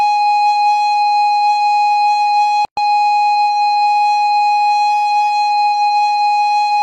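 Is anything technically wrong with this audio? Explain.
Yes. At 2.65 s the music drops out for about 122 ms, resuming at 2.77 s: a gap at a join of encoded pieces. Two separately encoded segments were spliced without trimming, so the encoder's start-up delay and the last-frame padding both remain as silence between them. It sounds like a brief hole with smeared edges, after which the music picks up where it stopped. A waveform shows a flat, near-zero stretch; a spectrogram shows a vertical blank band with slightly blurred borders.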